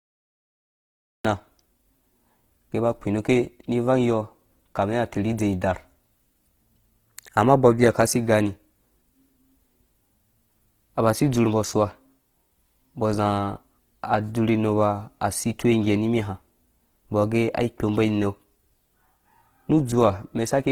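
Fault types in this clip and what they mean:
Opus compression: A starved codec, likely Opus at a rate fitting about 16 kbps, fills bands with folded content or noise, so the full-band speech sounds grainy and rough.
Cut-off start: The recording began late, so digital silence lasts until 1.25 s, where the speech cuts in mid-sound with no natural attack.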